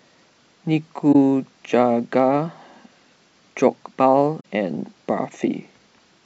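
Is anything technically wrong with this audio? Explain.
Yes, there are two stretches of corrupt frames concealed, at 1.12 to 1.16 s and 4.40 to 4.45 s. The decoder caught damaged AAC frames and papered over them itself, covering about 36 and 58 ms of the speech.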